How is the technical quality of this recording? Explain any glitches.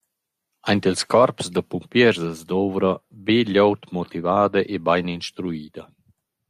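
No glitches are audible anywhere in the recording, so there is nothing to diagnose.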